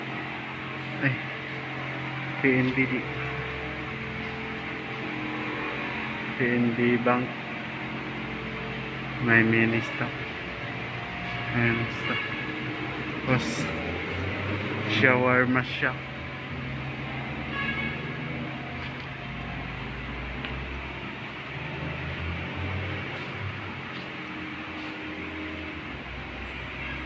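No technical faults can be heard anywhere in the audio; the signal stays continuous and steady throughout.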